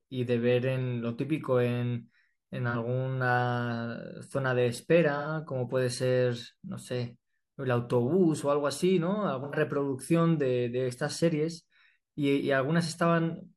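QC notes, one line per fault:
2.70 to 2.76 s, AAC frame loss with concealment. A brief smeared, noisy patch about 43 ms long, which fits one lost AAC frame. The decoder rebuilt the gap from the last good spectrum, so the speech blurs instead of dropping out.
5.17 to 5.28 s, AAC frame loss with concealment. A longer phasey, smeared stretch of about 85 ms, which points to two consecutive lost frames. Repeated spectral fill-in with scrambled phase causes the hollow texture.
9.44 to 9.55 s, AAC frame loss with concealment. Another smeared patch of about 85 ms with the same cause.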